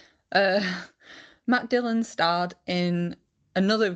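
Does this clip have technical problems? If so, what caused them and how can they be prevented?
No, there are no technical problems to report here.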